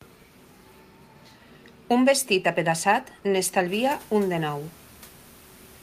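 Nothing in the signal chain of this speech recording has gone wrong: the background noise from the room jumps by about 22 dB around 3.5 s, but it is part of the recording itself and stays about 26 dB below the speech after that rise.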